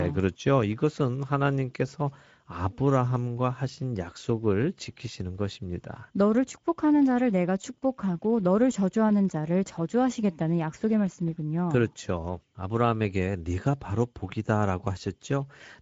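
From start to finish the speech carries Speex codec damage: a hoarse, noisy grain on every syllable, from a CELP coder short of bits for the excitation, which fits a bitrate around 17 kbps. Nothing reaches above 7.7 kHz, so the top sounds dull.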